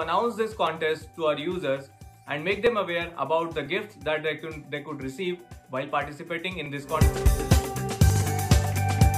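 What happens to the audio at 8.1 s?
At 8.1 s the audio briefly jumbles, with a garbled stutter until 8.22 s. This is chunks out of order: a 60 ms chunk plays one slot late, after the chunk meant to follow it, so nothing is lost but the sequence swaps and there are three hard joins.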